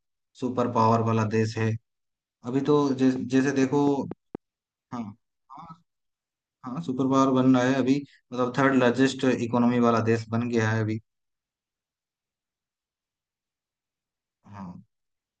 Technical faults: train of clicks

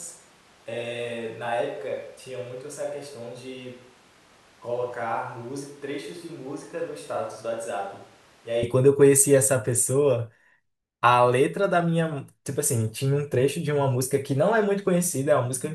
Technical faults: switch to a distant microphone

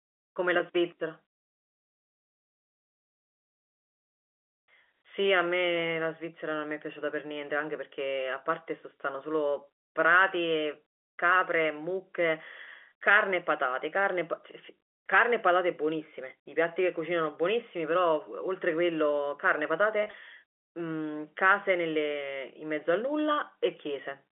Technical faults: packet loss with pitch repetition

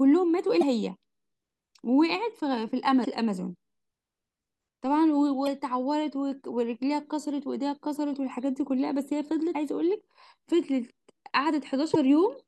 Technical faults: damaged data in a compressed stream

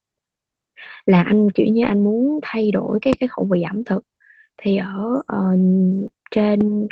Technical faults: lost packet rebuilt from error correction; loud pop; short concealed packet loss

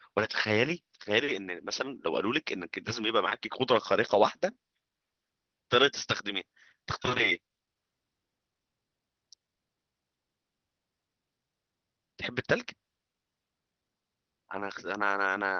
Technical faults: none

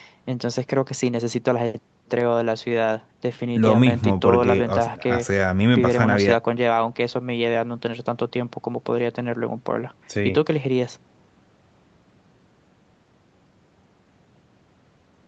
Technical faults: none

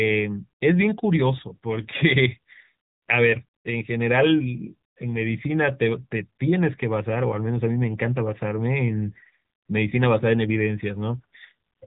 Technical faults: AMR narrowband mobile codec

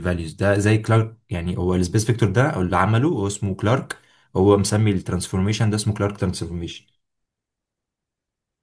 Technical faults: none

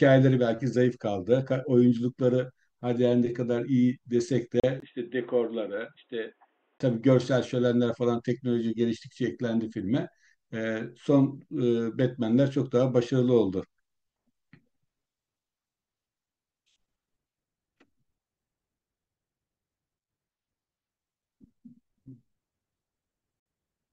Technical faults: Bluetooth stall; input switched to a poorer device

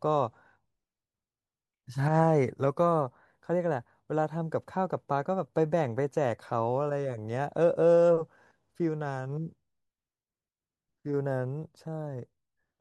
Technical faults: none

